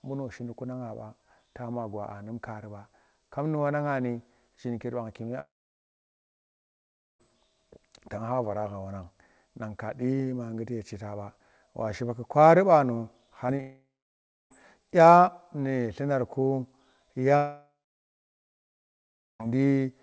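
Speech over what sounds like a G.722 call path (nothing above 8 kHz) with three long network dropouts, likely from connection stalls. At 5.40–7.21 s, 13.61–14.52 s and 17.36–19.43 s the last sound smears into a fading buzz or hiss, then goes quiet for roughly 1.7 s, 0.65 s and 1.7 s, resuming with that audio gone. Just before the middle one there's short concealed packet loss at 13.47–13.51 s and 13.57–13.61 s: about 20 ms lost each time, patched by extending the previous sound, so you hear quick wobbly smears.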